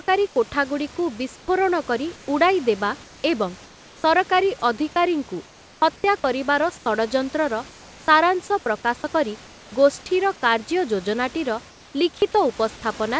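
Speech, with comfort noise in place of the background in its pauses. This happens at 0.28, 1.36, 2.16, 3.04, 5.46, 6.78, 7.70 and 9.46 s, for 80 to 580 ms each time. The room noise turns steady, featureless and about 1 to 4 dB quieter, likely because the sender uses discontinuous transmission.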